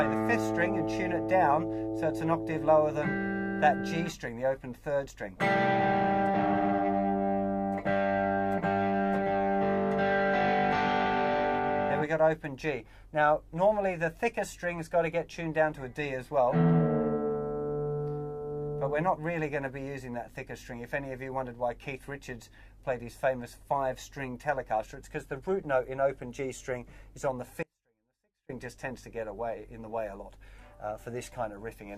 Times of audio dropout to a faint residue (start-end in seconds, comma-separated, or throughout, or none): 27.63-28.49